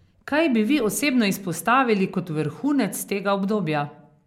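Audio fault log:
The speech signal shows no detectable technical faults anywhere in the clip.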